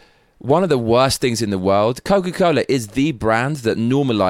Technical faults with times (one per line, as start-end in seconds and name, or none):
none